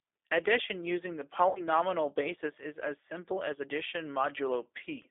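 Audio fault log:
Throughout: G.729 codec. The speech has that plainly audible low-rate VoIP character. At 8 kbit/s the coder rebuilds each 10 ms frame from a vocal tract filter, a pitch predictor and a handful of pulses, so voiced sounds come out slightly rough and synthetic. The line band sits at roughly 300 Hz to 3.6 kHz, which takes away the low body and all the top-end air, and the sibilants go dull.
1.49–1.61 s: VoIP packet loss concealed by the speech codec. Right after "using the", about 60 ms of audio goes missing, which fits three lost packets. The decoder fills the gap by extrapolating from its last pitch and filter and lowering the gain frame by frame, so the sound is stretched into a buzzy tone or a coloured noise that fades. Each frame builds on the previous one, so the voice stays weak or distorted until "basis is as simple" settles back in.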